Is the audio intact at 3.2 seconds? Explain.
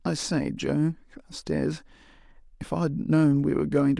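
Yes, the speech at 3.2 seconds plays through without any dropout, click, distortion or other audible fault.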